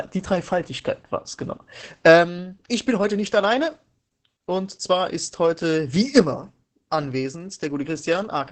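Opus voice compression runs through the whole speech clip. Nothing survives above about 8.5 kHz, a wideband SILK limit. The excitation is coded coarsely, which fits a rate near 10 kbps. Speech sounds muffled, hoarse and slightly robotic throughout.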